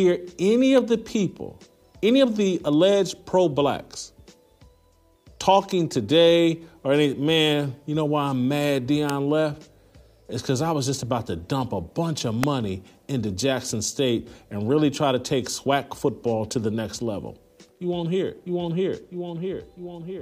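Three sharp snaps sit on top of the sound, at 0.78 s, 9.1 s and 12.43 s, each over in a couple of milliseconds. These are electrical switching spikes, most likely a nearby switch or motor arcing and the line picking up the burst. The first is fairly modest, peaking at about -15 dBFS, but the two later ones are much harder, up near -5 dBFS.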